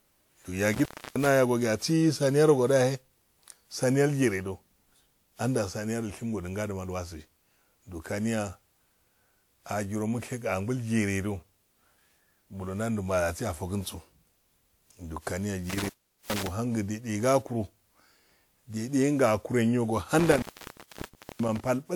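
Throughout the speech, the sound is swirly, smeared and hollow, with blurred attacks, though content reaches up to 20.1 kHz. That points to generation loss, likely from around ten WMA re-encodes at about 128 kbit/s: noise builds up across passes rather than one low-bitrate encode dulling the top end.

Intermittent contact occurs from 0.73 to 1.27 s, 15.70 to 16.48 s and 20.19 to 21.60 s, where a loose connection opens for about 0.30, 0.41 and 0.98 s. Crackle at each edge and faint hiss while the line is open set it apart from a clean digital dropout.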